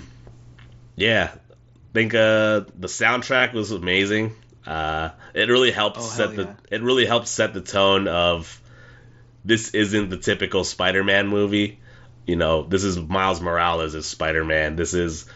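From 3.37 to 3.45 s, between "think uh the" and "was amazing", there is concealed Bluetooth headset packet loss. Lost packets were patched with recycled recent waveform. This gives a brief buzzy smear.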